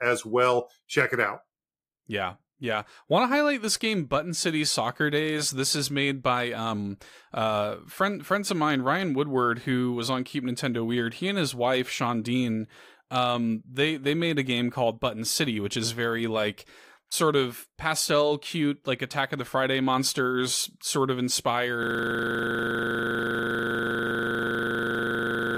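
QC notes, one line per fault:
21.83 s to end: system hang loop. A frozen driver replays one 40 ms buffer, giving an exact, gapless 25 Hz buzz rather than a dropout stutter.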